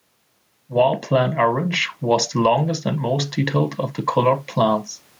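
Input gain is likely set far too high, with a fast limiter clamping down on every loud moment, causing gain pumping throughout the speech. The level swings by roughly 5 dB, and the room noise sits about 45 dB below the speech, which is left squashed.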